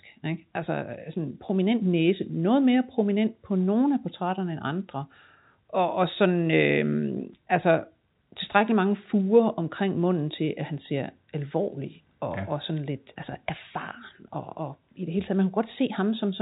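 Speech at telephone bandwidth, nothing above about 3.8 kHz, as expected for G.711 coding, with no technical fault to report.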